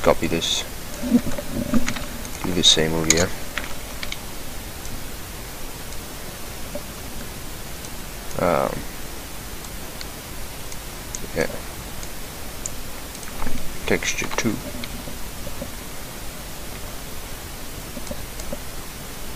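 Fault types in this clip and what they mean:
No technical faults are audible.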